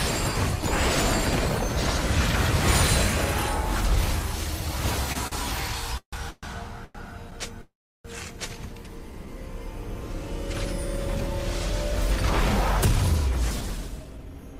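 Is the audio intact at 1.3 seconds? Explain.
Yes, the audio is intact at 1.3 seconds, with no dropout, glitch or other fault at that point.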